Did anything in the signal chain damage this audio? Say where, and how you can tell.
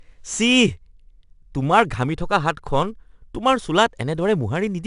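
Yes: 4-bit ADPCM compression at the codec stage, throughout. Gritty hiss tracks the speech level, and nothing above 10.6 kHz, which fits a roughly 22 kHz rate.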